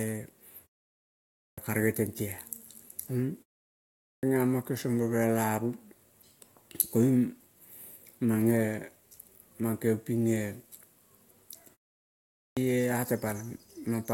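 At 1.14, 3.79 and 12.10 s, clipped start after a pause: after short silences, the output device takes about 0.44 to 0.47 s to wake, swallowing speech onsets. Unlike muted pauses, which only quiet the gaps, sound here is actually lost, so speech begins abruptly out of silence.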